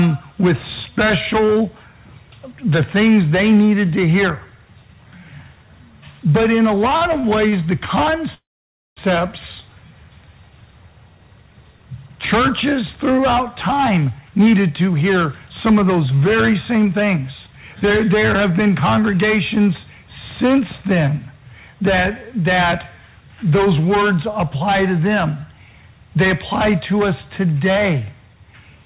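From 6.90 to 7.54 s, repeated stalls (stutter) break the sound five times, the longest about 46 ms. Late packets emptied the jitter buffer, and short filled stretches make it drag.

From 8.34 to 8.99 s comes a call audio freeze. The last sound trails into about 0.55 s of silence, likely from packets held up in transit, then resumes where it stopped.

From 13.73 to 19.69 s, jitter buffer speed-up plays the sound at 109% speed without changing pitch. Removing roughly half a second of pitch periods makes it sound hurried.

Throughout, nothing is heard above 4 kHz, which fits a narrowband call codec.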